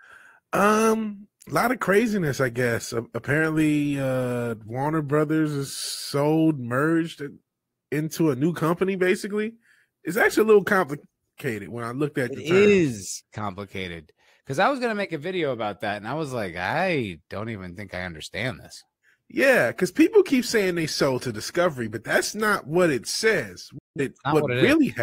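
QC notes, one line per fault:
23.78–24.01 s digital broadcast dropout: just after "not what it says", sound snaps to silence within 3 ms. The receiver muted on lost frames, which fits about four frames, or 171 ms of programme gone.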